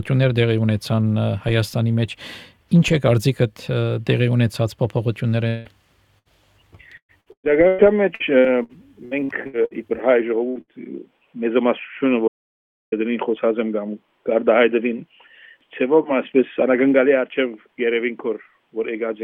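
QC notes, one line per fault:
5.47–5.68 s, long network dropout: The sound stops arriving for about 0.2 s, likely from a long network dropout. The receiver fills the hole by carrying the last sound forward as a fading buzz or hiss. The fill covers nearly the whole gap, so it never decays to silence. When the audio returns, about 180 ms of the original is missing, and the join sounds like a skip forward.
6.19–6.28 s, 10.49–10.58 s and 10.61–10.71 s, burst of packet loss: Each event loses about 60 ms of audio. The receiver patches each hole with about 65 ms of the last sound, stretched and turned down, which gives a brief held buzz or fading hiss. Playback then resumes slightly ahead, with the middle gone. The last two bursts are only about 30 ms apart.
6.97–9.74 s, repeated packet loss (robotic sound): Across this span there are 11 separate gaps, with about 0.84 s of audio lost in total. 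The longest gap is 118 ms. Each hole is filled by repeating the last sound, and another hole follows soon after. Concealment covers about 29% of the span. The result is choppy, robotic audio with pieces cut out.
12.28–12.92 s, audio dropout to silence: The sound cuts out abruptly and returns mid-flow about 0.64 s later. The gap is silent, with no room tone or background left. This points to silence being written while the input was gone, likely an audio dropout to silence from a lost device or link. Whatever happened in that stretch is not recoverable.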